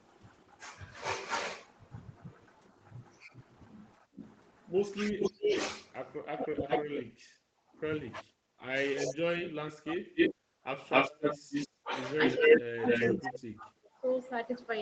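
Speech over a call path, band-limited to 8 kHz, with several echo-canceller faults. An echo leak from 3.34 to 7.02 s and again from 9.08 to 13.21 s brings back a delayed copy of the far-end voice, about 385 ms late in the first stretch and 261 ms late in the second, sitting only somewhat below the speech. This likely comes from a loudspeaker echo the canceller failed to remove. Speech suppressed in double talk hits from 4.97 to 6.68 s and from 8.22 to 14.05 s, with the voice dipping or cutting out in pieces. The drops reach about 25 dB across roughly 0.7 s in the first span and about 35 dB across roughly 3 s in the second, likely because the canceller attenuated everything while both sides spoke. The background is gated by the echo canceller from 7.03 to 7.74 s, where the room sound dips by about 16 dB before recovering.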